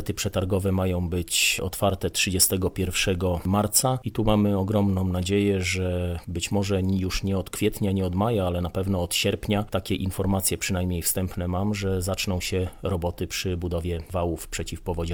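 Nothing here goes wrong at any point, so there's no fault to walk through in this recording.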